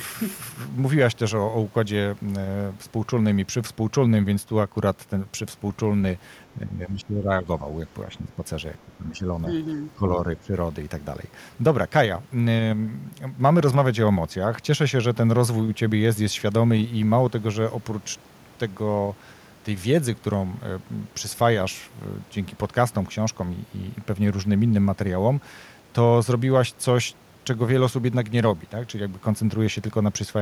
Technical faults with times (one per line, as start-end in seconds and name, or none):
6.55-7.63 speech suppressed in double talk
8.05-8.43 speech suppressed in double talk
8.86-9.27 speech suppressed in double talk
9.77-10.53 speech suppressed in double talk